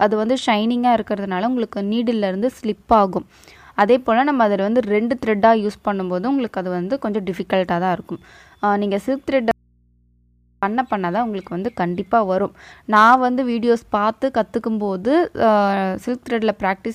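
From 9.51 to 10.63 s, an audio dropout to a faint residue leaves only hum about 40 dB down. The waveform is near-flat and the spectrogram is bare except for low hum lines, likely from a lost feed on a live path.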